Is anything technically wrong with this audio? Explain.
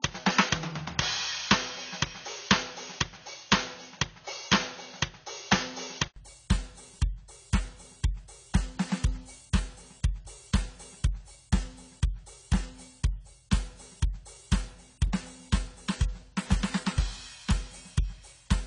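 Yes. From the start to 6.16 s, the music is dull and boxy, with nothing above 6.6 kHz. An 80 ms silence follows. Then the sound opens up at about the same level. The input likely switched devices at that point. The first device passed a narrower band and added a faint noise floor.

Throughout, nothing passes above 10 kHz. The music sounds smeared, with plainly audible warbling and fizz. This is likely AAC compression. Under a low bitrate, the encoder lowers its cut-off and coarsens detail. The damage fits AAC-LC at roughly 24 kbps.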